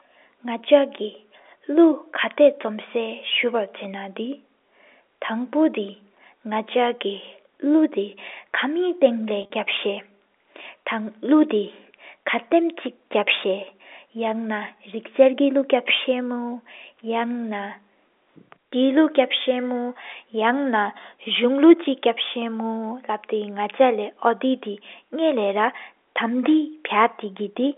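From 9.42 to 9.50 s, packet loss with pitch repetition interrupts the speech. About 60 ms is lost across 80 ms, the longest gap 40 ms. The receiver repeats the last pitch period to fill each hole, giving a brief held, buzzy tone.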